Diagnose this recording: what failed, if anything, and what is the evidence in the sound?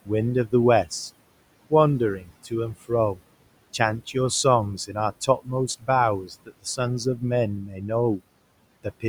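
Call processing failed in the noise suppressor, which produces noise suppressor artifacts throughout. The room noise, about 19 dB below the speech, is pushed down by about 21 dB in the gaps and returns under the speech, so it pumps. A spectrogram shows a dark noise floor between phrases. The waveform shows near-flat gaps.

The same suppressor causes speech cut by the noise suppressor at 2.19–3.19, 4.77–5.88, 6.24–6.79 and 7.66–8.2 s. In each span, roughly a few hundred milliseconds of speech is treated as noise and ducked, by up to about 13, 19, 21 and 8 dB respectively. These sections sound swallowed, and they show as envelope dips and holes in the speech energy.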